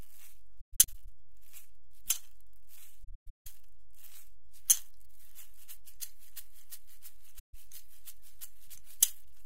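A recording of everyday sound with AAC frame loss with muting in three places: 0.60–1.08 s, 3.03–3.47 s and 7.39–7.54 s. Where frames go missing, the decoder zeroes their spectrum, and the overlapping transform windows fade the sound down and back up over roughly a frame of about 21 ms, leaving soft-edged holes. The first two stretches are broken gaps, with the longest dropouts around 150 ms. The third is a single clean hole of about 150 ms.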